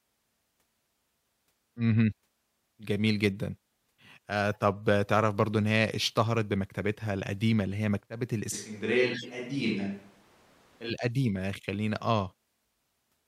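A speech recording with two kinds of fault. Corrupt frames decoded appear at 4.53 to 4.58 s, a faint blip spanning roughly two frames, and at 9.13 to 9.27 s, a louder burst over about three frames. In each case flipped bits in the compressed data led the decoder to place energy at wrong frequencies. From 8.54 to 10.89 s the sound abruptly turns roomy and hollow, with thinner bass and a room-noise floor roughly 30 dB below the speech, though the level stays about the same. This is likely a switch to a distant microphone, with the close signal dropping out and returning suddenly at each end.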